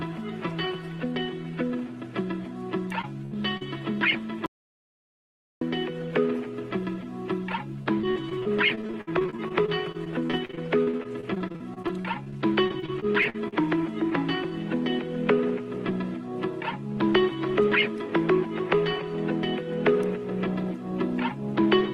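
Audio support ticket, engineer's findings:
Short concealed packet loss at 3.01 s and 3.57 s: packets late or lost upstream of the decoder, about 20 ms and 40 ms missing. Decoder extrapolated the preceding sound, pitch-following where voiced, shaped noise where not, then crossfaded back. Audible as a brief smear or wobble; a short transient can disappear.

Burst of packet loss, 3.25 to 3.33 s: roughly 60 ms lost in a run. Concealment held the last sound and attenuated it across the gap, giving a held buzz or fading hiss before audio resumes with that stretch gone.

Audio dropout to silence, 4.46 to 5.61 s: input signal lost, likely a device disconnect, link failure or accidental mute, with silence written meanwhile. Sound cuts to silence, no room tone, for about 1.15 s; content in that span is gone.

Repeated packet loss (robotic sound), 7.83 to 13.54 s: sustained loss or late arrival, roughly fifty holes, longest 57 ms, about 1.1 s missing in total and about 19% of the span concealed. 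Successive patches give choppy audio with fragments missing.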